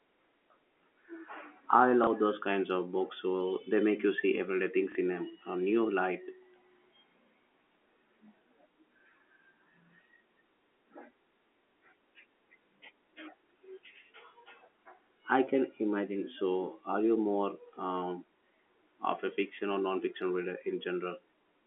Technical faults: packet loss with last packet repeated

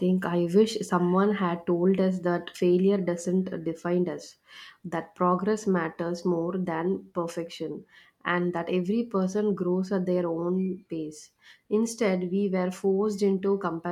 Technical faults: none

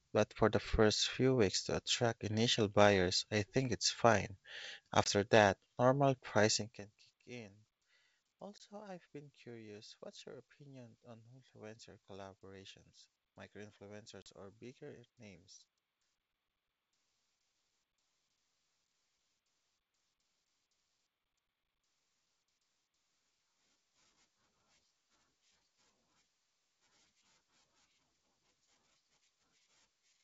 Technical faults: packet loss on an ADPCM call

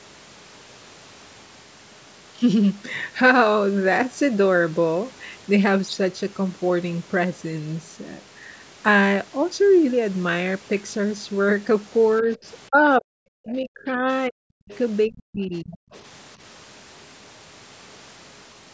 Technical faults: speech suppressed in double talk; other side's voice leaking through

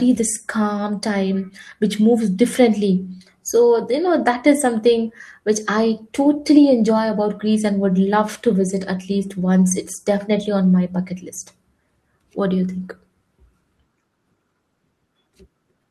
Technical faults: none

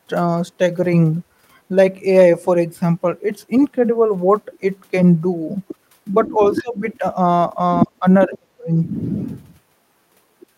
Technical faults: other side's voice leaking through; speech suppressed in double talk

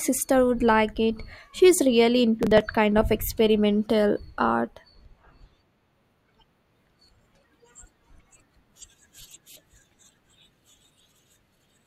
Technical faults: processor overload crackle

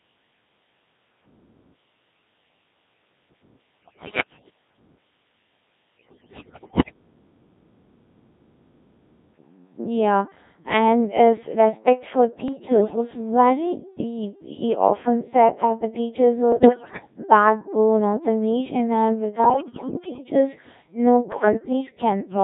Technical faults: Codec 2 vocoder; bit errors on digital voice radio

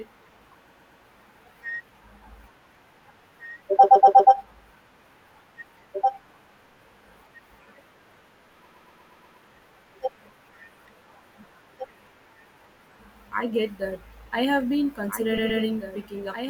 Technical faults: doubled audio track; repeated frames

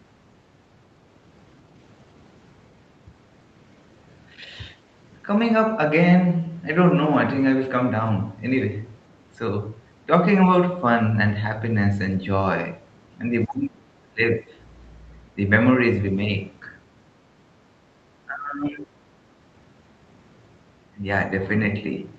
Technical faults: speech suppressed in double talk; background gated by the echo canceller

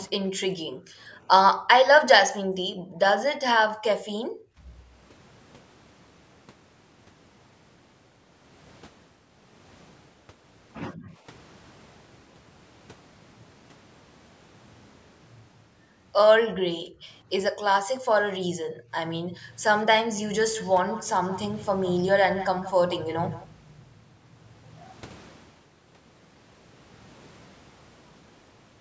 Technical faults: background gated by the echo canceller; echo leak

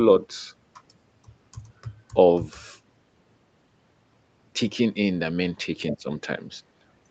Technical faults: none

